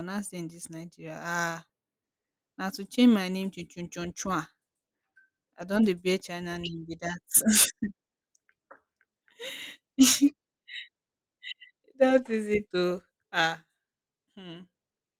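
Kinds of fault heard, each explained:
Lost packet rebuilt from error correction: lost audio was replaced by the low-bitrate copy carried in the next packet, so nothing drops out. Instead there is a brief rough, noisy patch at 5.61 s, just before "don dey bear", and a longer 40 ms one at 12.13–12.19 s.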